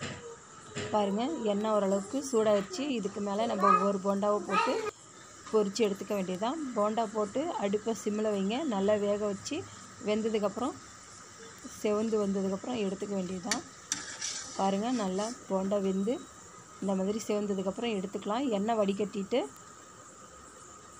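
From 0.11 s to 20.81 s, word clock ticks recur about every 0.3 s. The receiver's unlocked clock slips one sample each time.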